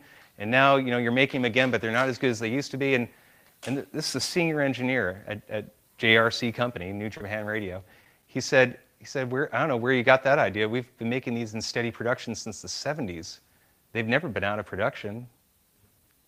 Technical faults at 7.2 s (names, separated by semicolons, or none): short concealed packet loss